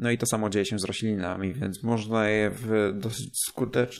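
From 1.0 s to the end of the clip, right after "samo dzieje się z", there is a time-stretched section. Processing that likely stretched the audio to fill a longer span slowed it to about 0.54 times its original pace while holding pitch, padding the gap by repeating short fragments. The speech abruptly drags at an unchanged pitch until the clip ends.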